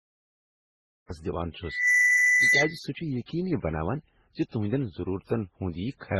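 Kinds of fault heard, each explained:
Transcoding between lossy codecs: smeared, warbly speech with stacked artefacts and nothing above 12.1 kHz, likely an MP3-like low-rate encode re-encoded to Opus; the spectrogram shows a hard ceiling.
Cut-off start: the audio is digital silence until 1.10 s, then speech jumps in mid-sound, with no attack; the waveform shows a flat line, then abrupt amplitude.
Loudspeaker feedback squeal: a 2 kHz tone swells over roughly a third of a second from 1.63 s, sits about 10 dB above the speech until 2.8 s, and appears as a bright horizontal spectrogram line.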